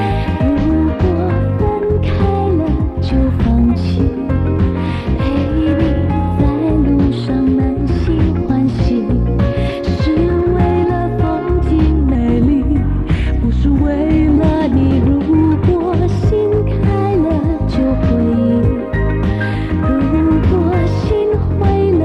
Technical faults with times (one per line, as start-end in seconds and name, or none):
12.15-14.37 section at the wrong speed